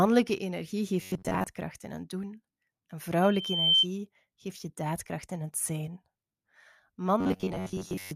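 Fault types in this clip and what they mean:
Robotic sound from repeated short buffers: From 1.02 to 1.44 s, and again from 7.21 s to the end at 8.16 s, the speech turns into a stiff, metallic buzz. The buzz sits at 93.8 Hz, so each repeated slice lasts about 10.7 ms. Most of the audio in these spans is repeats rather than new material. The likely cause is that fresh audio arrived too slowly, so playback kept looping the last short buffer.
Loudspeaker feedback squeal: From 3.22 to 3.86 s a single tone at 3.1 kHz rises out of the speech. It swells over about half a second and peaks at about 10 dB above the speech. This is the sign of a microphone hearing its own loudspeaker. At that one frequency the loop gain passed unity, so the tone fed on itself and grew until it stopped.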